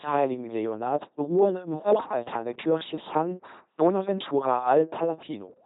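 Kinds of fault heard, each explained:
LPC-10 vocoder: throughout, the speech is rebuilt at 2.4 kbit/s from a buzz or hiss driving a small vocal-tract filter, sounding heavily robotic, with nothing above 3.8 kHz.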